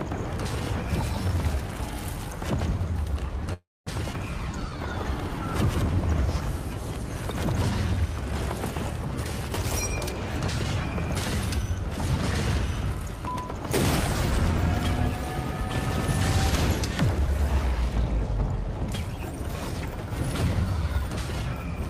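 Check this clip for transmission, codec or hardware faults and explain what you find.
Four network-related faults are audible, all tied to the receiver's jitter buffer.

A call audio freeze runs from 3.53 to 3.89 s. The last sound is carried on as a fading buzz or hiss, then about 240 ms of silence. The cause is likely packets held up in transit, draining the buffer. About 330 ms is inserted and nothing is lost.

A skip ahead follows at 4.13 to 4.15 s. Roughly 70 ms of audio was dropped while later audio was already queued. Playback jumps forward with almost no gap. The two sides are joined nearly directly.

A jitter buffer slow-down spans 4.38 to 5.37 s. The buffer was short, so the receiver repeated single pitch periods many times to rebuild its reserve. It added 69 ms, and playback runs at 94% speed. The pitch is unchanged and sounds are drawn out.

A jitter buffer speed-up occurs from 9.08 to 9.50 s. 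The buffer held more than its target, so short pieces of a pitch period or two were cut repeatedly, roughly 50 ms in all. The audio runs at 110% speed, hurried but at the same pitch.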